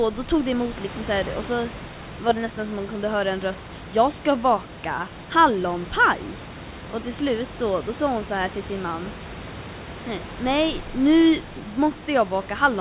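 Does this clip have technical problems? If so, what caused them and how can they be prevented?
No, nothing here points to a technical problem; the room noise sits about 14 dB below the speech, and the audio stops at 4 kHz, as expected for a G.711 call at 64 kbps.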